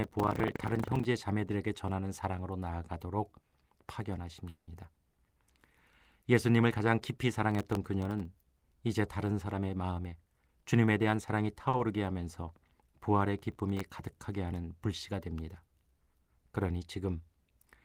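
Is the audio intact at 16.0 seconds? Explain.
Yes, the speech at 16.0 seconds comes through intact, with no dropout, click or other fault at that moment.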